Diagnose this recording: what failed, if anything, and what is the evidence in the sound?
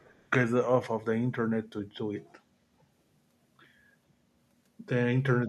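Echo leak, 0.0 to 0.28 s, at the call processing stage: a very faint copy of the speech, far below the direct level, trails it by 433 ms. This is likely a far-end loudspeaker echo that the echo canceller failed to fully remove and sent back.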